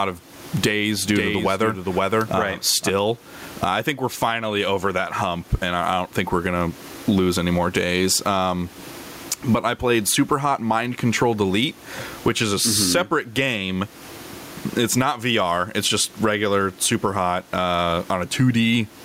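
Gain pumping runs through the whole speech recording. The input gain was likely set far too high, so a fast limiter clamps down on every loud syllable and then releases. The room noise sits about 36 dB below the speech, and the gain swings by around 20 dB, which leaves the dynamics squashed.

A doubled audio track appears from 0.67 s to 2.89 s. A second, full-band copy of the speech trails roughly half a second behind, a few dB quieter than the original, likely from the signal also arriving over a slower path. It carries no reverb tail and cuts in and out abruptly.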